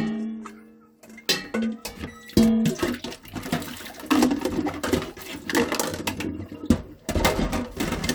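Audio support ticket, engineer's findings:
No faults found on listening; the signal holds continuity throughout, with nothing audible to trace to the capture, processing or playback chain.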